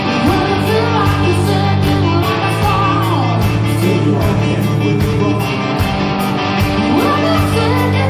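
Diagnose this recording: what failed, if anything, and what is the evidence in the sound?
Nothing stood out on listening that would point to a failure at any stage of the chain.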